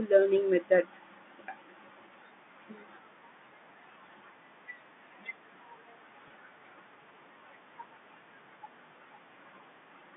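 Packet loss with pitch repetition occurs at 6.28 to 6.30 s. A brief stretch of the speech stream, about 20 ms, which fits a single lost packet, never arrived. The receiver filled the hole by repeating the last pitch period it had, so the speech briefly sounds held and slightly buzzy rather than dropping out. The gap is too short for the fade to silence, and the speech resumes within that fraction of a second. The narrow telephone band of the G.711 line, roughly 150 Hz to 3.6 kHz, carries through unchanged.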